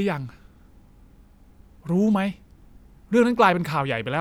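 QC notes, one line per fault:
No audible problems stood out when listening to this speech recording.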